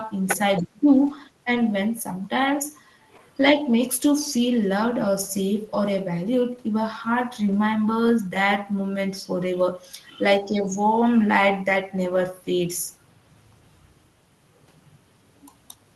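At 1.55 s, and again from 7.47 to 7.53 s, the speech turns briefly rougher and noisier without any gap. This is a lost packet rebuilt from error correction: the Opus stream lost audio, which fits one and then two lost packets, and the decoder filled each hole with the lower-bitrate copy carried in the next packet.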